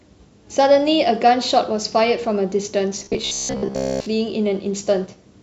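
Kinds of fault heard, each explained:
Robotic sound from repeated short buffers: from about 3.00 to 4.06 s the speech turns stiff and metallic, locked onto a flat buzz at 66.7 Hz while still loosely following the talking. The likely cause is fresh audio arriving too slowly, so playback keeps looping the last small chunk and skips the real audio. Most of that stretch is repeats, and a buzz at that rate fits a chunk of about 15 ms being replayed.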